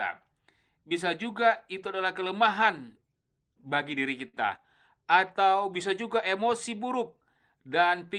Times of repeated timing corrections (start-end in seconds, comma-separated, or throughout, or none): 0.33-3.71, 5.88-8.07